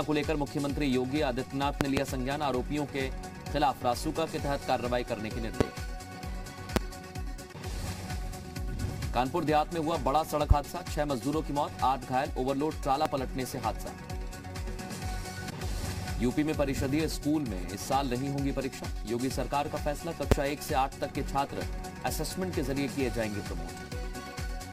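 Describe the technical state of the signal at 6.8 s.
At 6.76 to 6.79 s there's a single loud pop, roughly 25 dB over the sound, likely a voltage spike from a plug, switch or static, with the sound continuing underneath.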